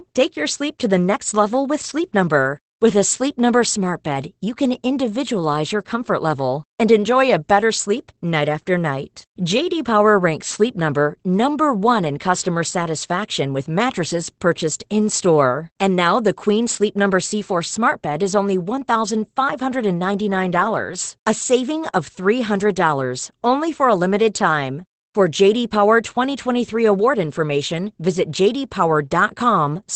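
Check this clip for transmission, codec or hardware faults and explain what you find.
Opus voice compression is present throughout the speech: it sounds muffled, hoarse and faintly robotic, with nothing above 8.6 kHz, as SILK wideband coding at a low rate, around 12 kbps, coarsely quantizes the excitation.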